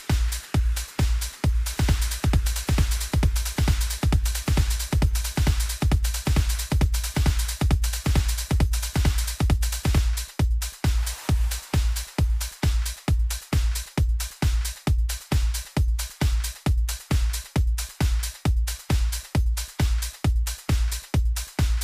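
From 1.70 s to 9.98 s the audio is a doubled audio track, most likely because the signal was picked up a second time through a slower path, so two copies reach the mix out of step. A full-band duplicate trails the original by about a second and a half at roughly the same loudness, with no decay or room colouring, giving a clean, distinct repeat of everything. The copy cuts in and out abruptly at those times.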